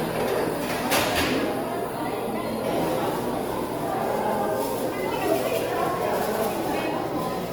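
Everyday sounds with plainly audible Opus compression throughout: tones turn grainy and noisy though bandwidth reaches 20.2 kHz, likely from CELT-mode coding at a low bitrate near 24 kbps.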